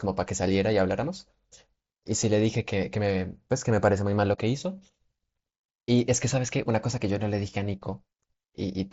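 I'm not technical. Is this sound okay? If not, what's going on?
Yes, there's nothing wrong to hear in this sound.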